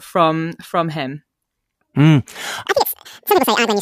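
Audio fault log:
2.68–3.82 s, audio read two samples at a time (double speed): the last stretch of speech suddenly races at twice the pace and jumps an octave, up 12 semitones. Pairs of samples are being taken as single frames, so everything plays through twice as fast and high frequencies fold back down.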